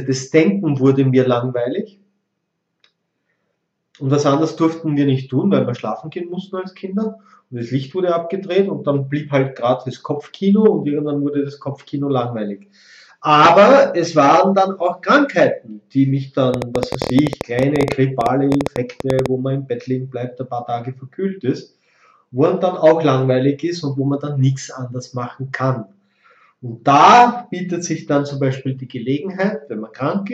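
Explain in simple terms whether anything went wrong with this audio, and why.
Yep, there's a problem from 16.54 to 19.27 s: a train of clicks. For just under three seconds you get a burst of ticking laid over the sound, around eleven clicks a second at an uneven pace, roughly thirty in all, and they stand out clearly above everything else. Each click sounds much like the last, which points to something outside the sound itself, likely electrical interference from nearby gear or a faulty connection or power supply.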